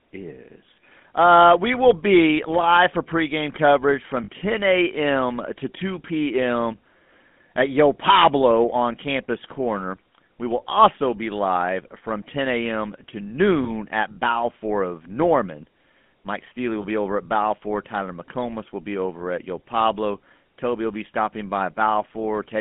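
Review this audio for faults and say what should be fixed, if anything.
The whole clip has the buzzy, gravelly roughness of the GSM full-rate codec at 13 kbps, with the band squeezed to roughly 150 Hz–3.5 kHz. To avoid it, record or route the audio over a wideband path rather than a GSM call leg.

Lost GSM frames show up at 4.24 s after "for pregame coverage from", 13.64 s, and 16.82 s before "over at". Each is a short metallic ring where the decoder repeats the last good frame, about 40 ms at the first (two frames' worth) and 20 ms at the others. A cleaner radio link or a recording source with less packet loss would prevent these.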